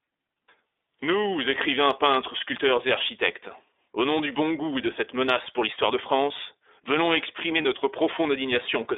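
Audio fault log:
Throughout, iLBC codec: the speech passes through a narrowband line of about 300 Hz to 3.7 kHz and comes out clear but slightly rough and synthetic, coded in 30 ms frames at a rate that fits 13.33 kbps. On a spectrogram nothing sits above 3.7 kHz.
7.62 to 7.66 s, lost iLBC frames: just after "venons exprimer", a gap that fits one 30 ms frame is filled by the decoder repeating the last pitch cycle with added noise, so it sounds like a brief buzzy held vowel. The waveform shows a short run of near-identical periods, and the voice is clean again immediately.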